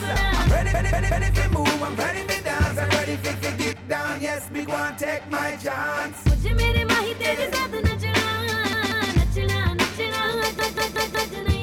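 Fresh audio failed to arrive in time, so the device replayed its last buffer: repeated buffer stutters at 0.74, 3.34, 8.73 and 10.59 s, each a 186 ms chunk (fitting an 8192-sample buffer) sounding extra times with hard joins.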